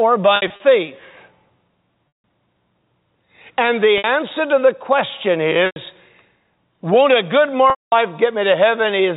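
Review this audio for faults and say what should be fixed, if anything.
Packet loss with pitch repetition occurs at 0.36, 2.08, 3.98 (just before "to the question"), 5.66 (right after "to the question") and 7.7 s (after "won't a good"). The receiver fills each 60 to 220 ms gap by repeating the last pitch period, so the sound holds with a buzzy tone and the longer gaps fade toward silence. A larger jitter buffer with forward error correction or redundant packets would prevent it.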